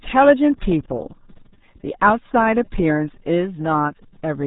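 Throughout, the speech carries RealAudio 14.4 codec damage: nothing passes above 3.8 kHz, leaving a heavily muffled, gargly sound that fits an 8 kbit/s dial-up codec rather than simple low-pass filtering. From 0.32 to 1.82 s, sample clock jitter adds a faint roughness, roughly 55 dB below the signal, that swells on loud, bright sounds and disappears in pauses, unlike steady background hiss.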